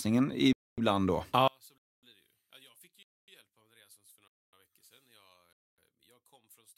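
At 0.53 s the speech stops dead for 250 ms, then resumes exactly where it left off. This is a gap between chunks. The audio arrives in 1-second pieces and silence is inserted at each join. Nothing is missing, only delayed. The hard-edged holes recur at 1.78, 3.03, 4.28 and 5.53 s, each 250 ms. That strict 1.25-second spacing separates it from dropouts, which remove sound and fall irregularly.

From 1.48 s to the end, the level falls by about 31 dB and the speech becomes a faint residue. The likely cause is one channel inverted: with one stereo channel's polarity reversed, summing to mono cancels everything the two channels share, so the centred speech largely vanishes. What sets this apart from a simple level drop or a filter is that only the difference between the channels survives. The speech does not just get quieter or duller; its core disappears.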